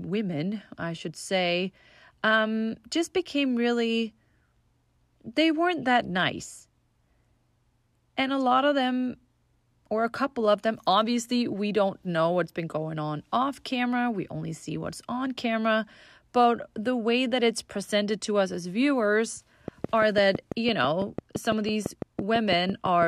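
From 19.68 to 23.03 s, a train of clicks ticks across the speech at a steady six per second, around twenty, jumping well above it, likely interference from nearby equipment.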